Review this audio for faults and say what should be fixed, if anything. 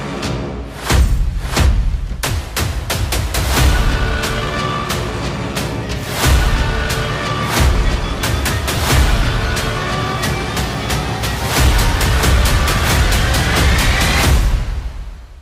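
Lost LE Audio frames, 8.76 to 8.78 s: about 15 ms of sound drops out, which fits two lost frames. The LC3 decoder concealed the gap by reusing the last spectrum with randomised signs, so a brief noisy smear replaces the original sound. Strengthen the Bluetooth LE Audio link or add retransmission headroom so frames arrive in time.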